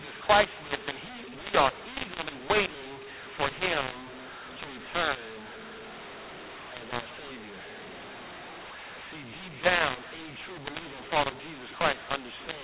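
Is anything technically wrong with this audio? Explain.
Yes, there's a mu-law and A-law mix-up running through the whole clip. The speech sits in a normal G.711 telephone band, 8 kHz sampling, but the samples were written as A-law and then read back as mu-law. The two laws map the 8-bit codes onto levels differently, so every sample lands at the wrong amplitude. Some come out too loud and others too soft, which makes the speech harsh and gritty. The quietest codes get pushed well above silence, so the pauses fill with noise instead of going quiet.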